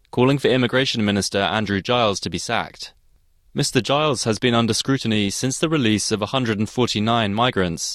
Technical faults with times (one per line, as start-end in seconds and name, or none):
none